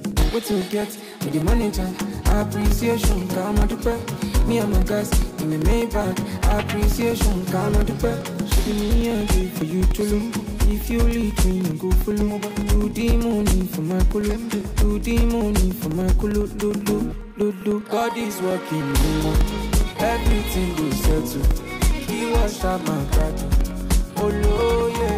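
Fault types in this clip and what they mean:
periodic USB or driver dropouts: Something stalls the USB transfer or the audio driver on a fixed schedule, so each stall loses a short stretch of samples that gets filled with silence. Here the gaps come every 0.1 s, ten per second, from 0.12 s to 25.1 s, each about 2 ms long. Across the clip that adds up to hundreds of evenly spaced ticks, heard as a steady rapid clicking whenever signal is present.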